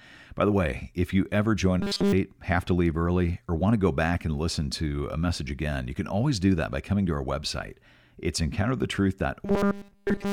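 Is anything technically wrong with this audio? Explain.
Yes. Robotic sound from repeated short buffers occurs from 1.81 to 2.13 s, between "way if you ever" and "have to leave early", and again from 9.46 s to the end at 10.33 s. Audio was likely arriving too slowly, so playback looped a 5 ms fragment in place of the skipped material, almost entirely repeats. That loop imposes a fixed 200 Hz buzz, turning the speech into a rigid metallic buzz.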